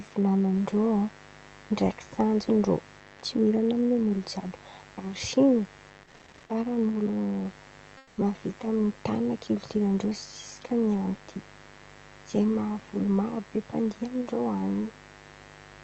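A mains buzz at 50 Hz runs through the whole recording, roughly 25 dB below the speech. Switching spikes twice per cycle spread harmonics upward, giving a steady, raspy edge.

From 7.97 to 8.17 s, comfort noise replaces the background. For 0.2 s, the room sound becomes a flat, featureless hiss about 4 dB quieter, likely from Opus discontinuous transmission filling a pause.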